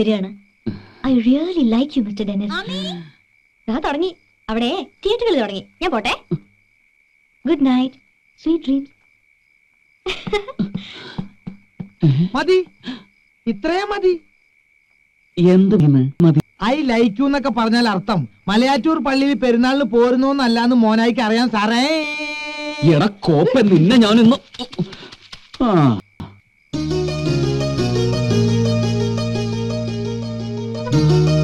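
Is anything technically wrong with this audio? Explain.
Yes. Chunks out of order occur at 15.8 to 16.4 s and again at 26.0 to 26.4 s. In each case a block of audio about 200 ms long plays after the blocks that should follow it. In the first, the displaced block appears to land two positions late. In the second, two neighbouring blocks sound swapped. No material is missing, but the sequence is scrambled, and the hard joins make for a brief jumbled stretch.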